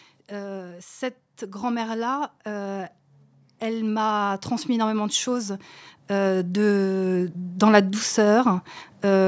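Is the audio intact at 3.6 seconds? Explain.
No. From 3.6 s the speech and the background noise behind it swell together, climbing steadily by about 5 dB until the level settles at around 5.56 s. This is automatic gain rising: the gain control judged the input too quiet and turned its gain up gradually over those two seconds. Because it scales the whole signal rather than the voice alone, the background noise rises in step with the speech.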